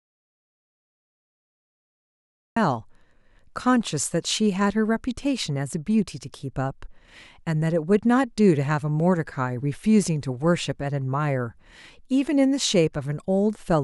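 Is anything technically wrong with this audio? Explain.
Yes. From the very start until 2.56 s, this speech clip has an audio dropout to silence: the input was already lost when the file begins, and the recording sits in silence until the speech cuts in abruptly. There is no room tone or hiss in that stretch, so it was likely a disconnected or muted input while the recorder kept writing empty samples. On a waveform it is a flat line; on a spectrogram, a fully black band before the speech appears.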